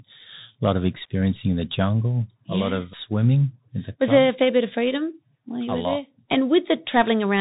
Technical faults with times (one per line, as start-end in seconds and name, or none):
0.00-7.41 Bluetooth CVSD headset codec